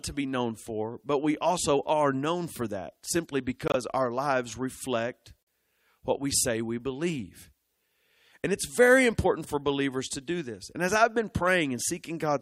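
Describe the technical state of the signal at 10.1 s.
At 10.1 s the speech signal is intact, with no audible dropout, clipping, distortion or other fault.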